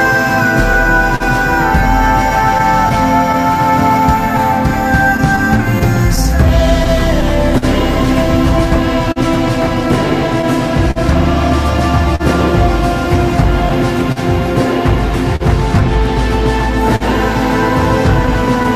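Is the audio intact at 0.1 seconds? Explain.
No. Clock drift between sender and receiver affects the audio from the very start, including 0.1 s, and continues throughout. The sending clock runs roughly 3 percent slow relative to the receiver, so the jitter buffer keeps draining. To fill the gaps, the receiver repeats short fragments. The result is small recurring timing hiccups and stutters at uneven intervals across the whole sound.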